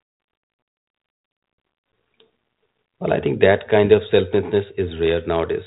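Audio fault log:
The speech has passed through a G.726 ADPCM link at 32 kbit/s, the rate DECT cordless phones use, so it is band-limited to telephone bandwidth with nothing above about 3.8 kHz and carries only the light coding grain expected at that rate, with no fault heard anywhere in the signal.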